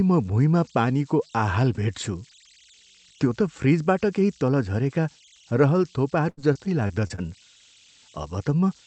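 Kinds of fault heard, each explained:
Converter idle tones: A faint tone near 3 kHz, about 30 dB below the speech, throughout. An undithered delta-sigma converter falls into repeating bit patterns at low levels.
Repeated packet loss (robotic sound): Choppy speech from 6.29 to 7.20 s with five short holes, the longest 78 ms. Each lost packet was patched by stretching the preceding sound.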